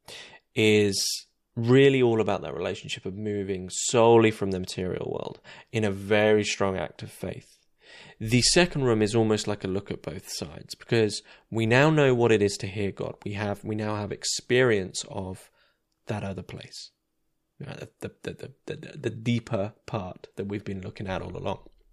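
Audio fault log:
No faults detected in the recording.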